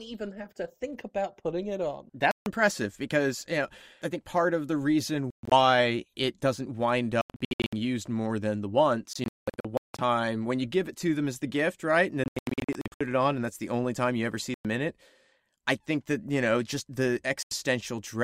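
Silent gaps cut into the sound at 2.31, 5.30, 7.21, 9.13, 12.24, 14.54 and 17.43 s. Each is likely a Bluetooth dropout, where packets arrived late and were discarded. Some gaps are single holes of 85 to 150 ms. Others scatter over up to 0.85 s. The sound resumes as if it had kept playing.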